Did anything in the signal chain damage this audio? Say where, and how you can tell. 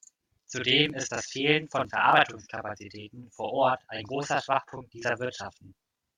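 Yes. Channel delay (doubling) is audible from start to finish, and it comes from the driver or buffer stage. One channel runs about 40 ms behind the other, and once the two are summed to mono the late copy sits right behind the original at equal level. The result is a doubled, slapback sound. A room echo would be quieter and would decay, and a short offset would only colour the tone as comb filtering. A single equal-level repeat this long points to a misaligned buffer.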